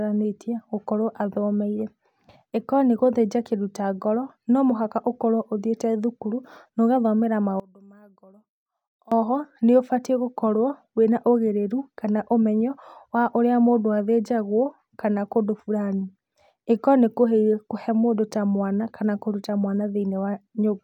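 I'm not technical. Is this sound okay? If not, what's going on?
No. From 7.60 to 9.12 seconds, just after "ũthiĩte thukuru na ũgathomera", the speech suddenly drops to a faint trace. This is likely one channel inverted: one side of the stereo pair is flipped upside down, so when the two sides are combined into one, the centred voice cancels itself out. Only the small differences between the left and right channels remain, which is why the voice almost disappears for those moments.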